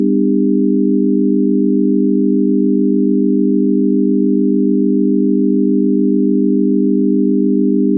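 No technical faults can be heard anywhere in this recording of sounds.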